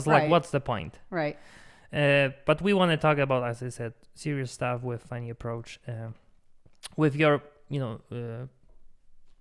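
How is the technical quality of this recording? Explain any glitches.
No glitches can be heard anywhere in this recording. The speech runs continuously, and nothing in the signal chain draws attention to itself.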